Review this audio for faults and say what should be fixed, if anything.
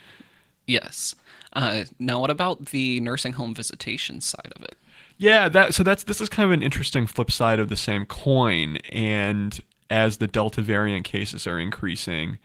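Nothing stood out on listening, so there is nothing here that needs fixing.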